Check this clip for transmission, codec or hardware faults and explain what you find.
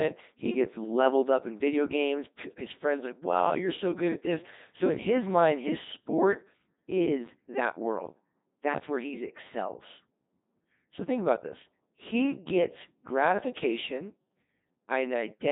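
One codec fault runs through the whole clip. Nothing else is reported here.

Codec 2 vocoder, throughout the clip: the speech has been reduced to a handful of parameters: pitch, voicing, energy and a coarse spectral envelope. The decoder then rebuilt it from sine waves rather than reproducing the original waveform. The damage is heavy, which fits the 2.4 kbit/s mode. The result sounds robotic and buzzy, with nothing audible above 3.8 kHz.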